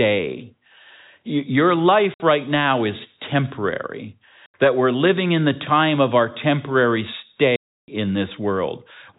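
Packet loss filled with silence opens three holes in the speech: 2.14 to 2.20 s (60 ms), 4.46 to 4.54 s (80 ms) and 7.56 to 7.88 s (320 ms). Every gap is a multiple of 20 ms, which fits 20 ms packets. The receiver played silence for the missing ones, so the sound stops and restarts abruptly.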